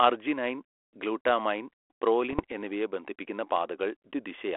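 Bit errors on an ADPCM link, with roughly half a percent of bits flipped on what sounds like a narrowband G.726 telephone path, disrupt this speech recording from 2.30 to 2.52 s, just before "എന്നിവയെ ബന്ധിപ്പിക്കുന്ന". Each corrupted bit throws off the decoder's step size and predictor, so the damage rings on briefly as pops, rough bursts and sudden level jumps.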